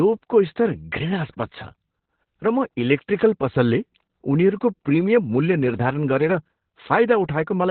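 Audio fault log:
Throughout: Opus voice compression. Speech is cut off above 4.2 kHz and sounds muffled, hoarse and robotic from coarse SILK narrowband coding, which fits roughly 8 kbps.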